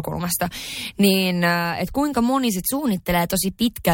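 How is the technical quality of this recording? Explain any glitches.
One glitch stands out: a drift correction step from 2.60 to 3.69 s, just after "äh että kuinka moni". Clock-matching software likely jumped the playback rate in one step to rebalance its buffer. The speech therefore runs 5.4% fast and rises 91 cents, nearly a semitone, before snapping back to normal.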